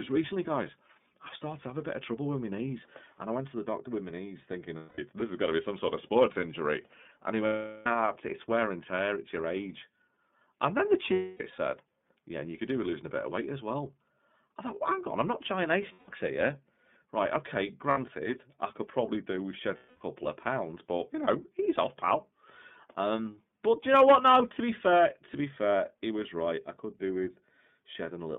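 Speech carried over the iLBC codec, at a rate consistent with its 30 ms frame mode, is confined to about 150 Hz to 3.6 kHz and sounds plainly rough and synthetic. Lost iLBC frames at 4.76, 7.47, 11.13, 15.93, 17.90 and 19.76 s, lasting 210, 390, 270, 150, 60 and 240 ms, were filled by repeating the last pitch cycle mixed with noise. Each gap is heard as a held, buzzy vowel, and the voice is back to normal almost immediately afterwards.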